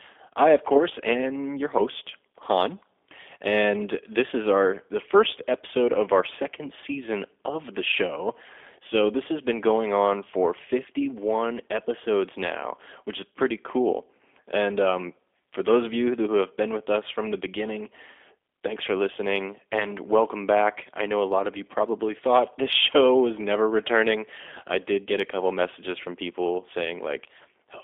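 G.729 codec damage runs through all of this speech recording and is plainly audible. The band is confined to about 300 Hz to 3.5 kHz, and the voice has the rough, slightly synthetic grain of a coder that rebuilds each 10 ms frame from a vocal tract filter, a pitch predictor and a few pulses rather than the real waveform, which fits G.729A at 8 kbit/s.

VoIP packet loss concealed by the speech codec occurs from 19.80 to 19.85 s, just after "for listening" and before "welcome back I know". The gap fits a single lost 10 ms frame. The decoder filled it by extending its last pitch and filter with falling gain, giving a brief stretched, fading sound. Because each frame depends on the one before, the voice stays weak or distorted for tens of milliseconds or more after real packets resume.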